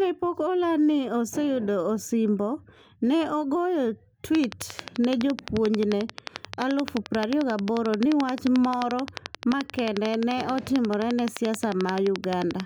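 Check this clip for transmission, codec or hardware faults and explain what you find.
There is one fault, a train of clicks. From just after "ne ogoyo" at 4.35 s to 12.61 s, something, likely interference from nearby equipment or a faulty connection or power supply, injects a pulse 11.4 times a second at regular spacing. Roughly a hundred near-identical clicks, peaking about 15 dB above the speech, tick steadily over the words and through the pauses.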